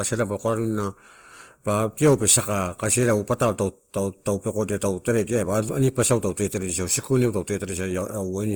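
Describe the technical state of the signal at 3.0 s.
At 3.0 s the speech carries Opus compression that runs through the whole clip, and it is plainly audible: tones come out grainy, rough and noisy rather than swirly, because the encoder keeps each band's energy but fills starved bands with folded or noise content. The coarseness fits a low rate near 24 kbps. On a spectrogram, bands look smeared and speckled instead of holed, with content still reaching about 20.2 kHz.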